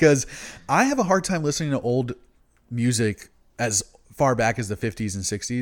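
Nothing stood out as a technical fault on listening to this speech recording.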